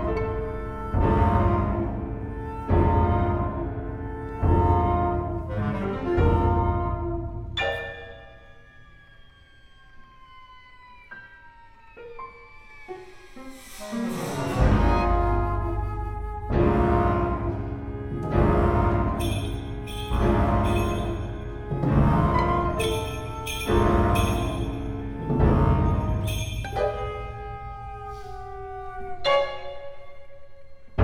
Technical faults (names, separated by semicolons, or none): none